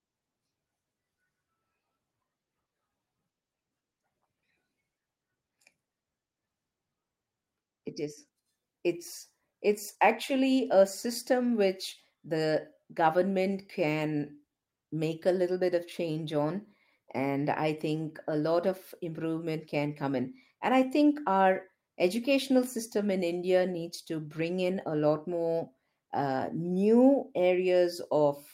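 Speech recording, with nothing technically wrong with it.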